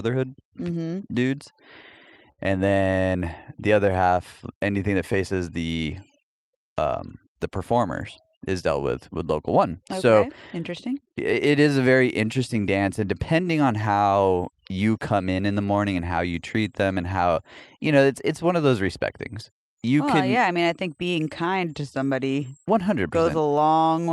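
Clock drift between sender and receiver runs through the whole speech clip. The sender's clock is about 4 percent slower than the receiver's, so the jitter buffer keeps draining, and the receiver has to stretch the audio to stay in step. The result is uneven small hiccups throughout.

Repeated timing corrections first appear from 0.26 to 1.53 s. The receiver plays at 97 percent speed, adding around 50 ms in small repeated pieces. The speech sounds slightly dragged, with a faintly unsteady tempo rather than any obvious break.

A short stall from a late packet occurs at 2.32 to 2.40 s. The packet arrives late and the buffer runs empty, so the last sound is held for 58 ms until the packet shows up. Nothing is lost, but one sound lingers with a slight buzz or dip.

Repeated timing corrections resume from 3.74 to 24.02 s at 96 percent speed, adding about a second in total. The many small stretches, all in the same direction and unevenly spaced, make the delivery sound slightly slow and uneven in rhythm.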